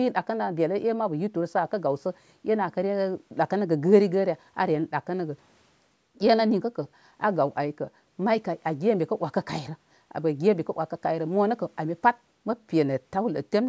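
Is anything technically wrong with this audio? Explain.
No, nothing stood out as technically wrong when listening to this speech recording.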